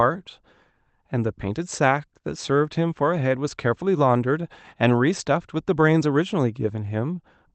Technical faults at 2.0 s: none

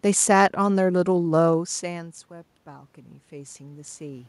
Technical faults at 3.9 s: automatic gain rising

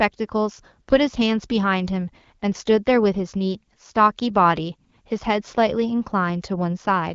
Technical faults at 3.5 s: none

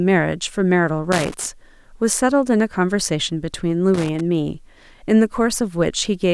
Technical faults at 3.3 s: none

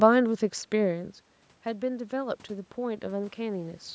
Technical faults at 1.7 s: automatic gain rising

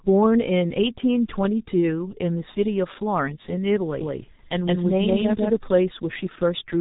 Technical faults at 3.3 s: G.723.1 codec

